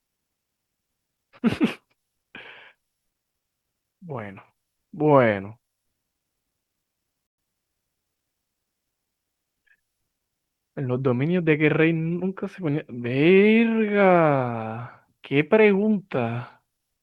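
A speech clip with one dropout. From 7.27 to 7.38 s the sound cuts to silence for 115 ms, then resumes. It is likely a Bluetooth stall, where delayed packets emptied the playback buffer.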